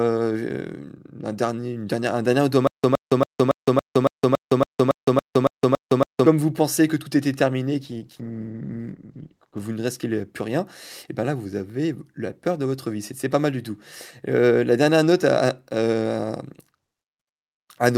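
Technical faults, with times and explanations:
2.67–6.26 s, stutter with silent gaps: a 116 ms burst of sound replays 13 times at a steady 280 ms pace, with 164 ms of dead digital silence between repeats. The likely cause is a stalled stream replaying its last fragment at each retry, so the audio meant for that stretch is lost.
7.8–9.67 s, call bitrate drop: the sound turns coarser and rougher, bottoming out for about 1.8 s before clarity returns. This fits the encoder's bitrate falling from 64 kbps to 17 kbps after the call's bandwidth estimate fell, which leaves far fewer bits to describe the audio.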